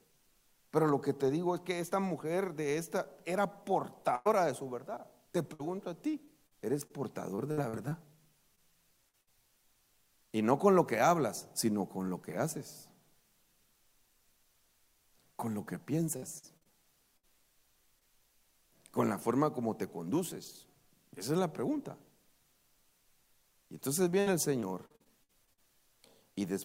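At 4.15 to 4.27 s a burst of packet loss removes about 100 ms of audio. The receiver extends the last sound and fades it, so a held buzz or hiss dies away before the audio picks up further along with a piece missing. A spectrogram shows the final spectrum smeared flat across the gap and darkening, and the waveform envelope tapers to a trough. The same happens more briefly at 9.21 to 9.29 s, where about 60 ms goes.

From 5.53 to 7.93 s comes repeated packet loss with a robotic sound. Nine holes, none longer than 58 ms, are each patched by continuing the previous sound, and together they fill about 12 percent of the stretch. The result is choppy, with pieces missing. On a spectrogram it looks like a row of short frozen, stretched blocks cutting into the natural movement, and the waveform shows repeated flattened segments. The pattern returns at 16.17 to 17.25 s with five gaps, about 20 percent concealed, and at 24.11 to 25.59 s with eleven gaps of up to 60 ms, about 22 percent concealed.

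Short concealed packet loss occurs at 8.55 s (about 20 ms), at 9.09 to 9.15 s (about 40 ms) and at 17.99 s (about 20 ms). Each hole is bridged from the preceding sound and blended back into the real audio. It is heard as a quick smear or wobble, and it shows on a spectrogram as a thin vertical seam where fine detail briefly blurs.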